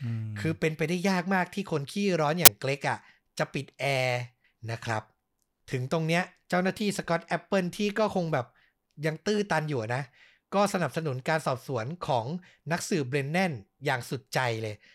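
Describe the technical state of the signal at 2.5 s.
An uninitialised buffer was played out from 2.45 to 2.48 s: a block of memory went to the output before any audio had been written into it, so whatever stale values it held were treated as samples. The span of roughly 21 ms fits a 1024-sample buffer. In the speech this is heard as a sudden, loud burst of harsh digital noise that breaks into the signal and stops just as abruptly.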